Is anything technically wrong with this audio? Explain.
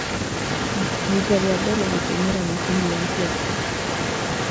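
Yes, there is an echo leak. A far-end echo canceller likely let the loudspeaker pickup through, so a copy of the speech returns about 260 ms late, only about 5 dB quieter, from 0 to 0.19 s, 0.35 to 2.39 s, and 2.55 s to the end.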